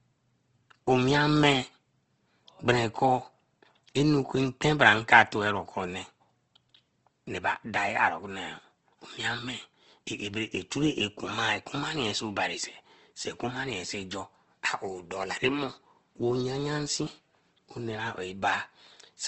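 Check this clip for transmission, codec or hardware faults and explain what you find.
Yes, one codec fault runs through the whole clip. Opus compression, likely in CELT mode starved near 16 kbps, noise-fills bands it cannot afford, so speech turns grainy and rough, with nothing above 8.2 kHz.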